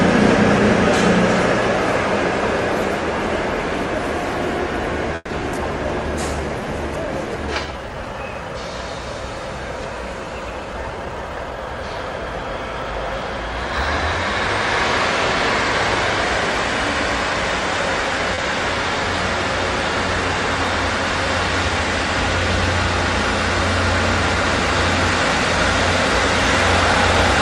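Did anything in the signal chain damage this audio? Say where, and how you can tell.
Yes. At 5.15 to 5.31 s there is a call audio freeze, likely from packets held up in the network that emptied the jitter buffer. The receiver extended the last sound for about 140 ms, ending in about 20 ms of silence, before playback resumed where it stopped, with nothing lost.

Right after, at 5.39 to 5.42 s, comes a skip ahead in the network and jitter-buffer stage. With later audio already queued, a stretch was discarded and playback jumps forward. Roughly 70 ms of sound is gone, and the two sides are joined almost directly.

From 7.66 to 8.14 s, the jitter buffer slow-down shows the receiver rebuilding its reserve by repeating single pitch periods or pause fragments many times in a row. This adds 72 ms, so the audio plays at 86% speed at unchanged pitch, with drawn-out sounds.

Between 10.50 and 11.76 s, the jitter buffer speed-up is the receiver trimming excess delay. 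It repeatedly cut short pieces of one or a few pitch periods, removing roughly 150 ms. The sound runs at 112% speed with its pitch unchanged, so it comes across as hurried.

At 18.35 to 18.40 s there is a short stall from a late packet. A packet missed its playout time, the buffer ran dry, and the receiver stretched the last sound by 30 ms before continuing from the same point. Nothing is missing, but that sound is held too long.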